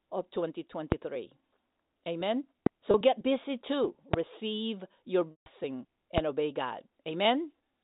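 A loud pop hits at 0.92 s, then again at 2.66 s. Each lasts about 24 ms and peaks about 20 dB above the speech, likely from a voltage pulse such as a switch or static discharge. The speech carries on underneath. At 2.91 s comes packet loss with pitch repetition. About 30 ms is lost, just before "get busy too", and is bridged by a briefly held, buzzy repeat. Another pop follows at 4.14 s, right after "get busy too". A longer loss at 5.31–5.46 s covers about 150 ms and fades toward silence before the speech returns. A final pop lands at 6.18 s. Under all of this, the narrow telephone band of G.711 coding is audible.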